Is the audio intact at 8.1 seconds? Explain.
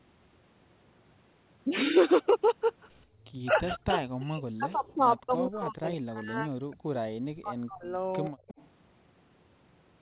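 No. From 8.05 to 8.3 s an echo leak adds a faint copy of the speech trailing about 122 ms behind, far quieter than the voice. It is likely a loudspeaker's pickup that the far end's echo canceller failed to remove. Unlike room reverberation, it is one distinct delayed repeat rather than a smooth decaying tail.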